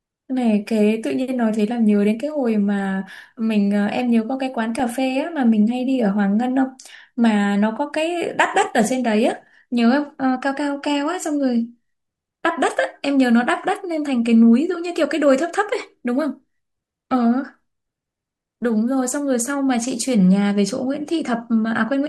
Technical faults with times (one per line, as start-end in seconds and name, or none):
4.79-4.82 DAB burbling